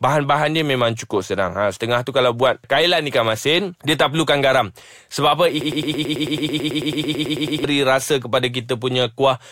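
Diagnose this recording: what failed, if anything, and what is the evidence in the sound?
A broken-record loop runs from 5.61 to 7.64 s. A 110 ms fragment repeats back to back 19 times before the speech resumes at "rasa kepada". A stalled playback or stream buffer likely kept resending its last block, so the audio due in that span is lost.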